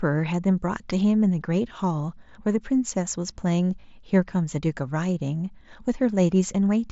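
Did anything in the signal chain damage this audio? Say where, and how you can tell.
Yes. At 3.81 to 3.83 s the speech briefly turns into a buzzy, steady tone held at full level for about 22 ms, followed by a slight warble as the real signal resumes. That is concealed Bluetooth headset packet loss on the wireless link between headset and phone. Voice packets went missing, and the receiver filled the gap by repeating the best-matching recent stretch of waveform. The length fits a short run of about three lost frames within the wideband mSBC stream.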